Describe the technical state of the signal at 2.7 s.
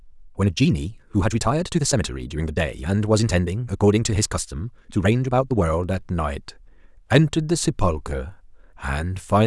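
At 2.7 s the speech sounds rushed, running about 1.63 times faster while its pitch stays put. This is a time-stretched section covering 0.0 to 5.7 s, likely from software squeezing the audio by dropping short slices to keep the pitch intact.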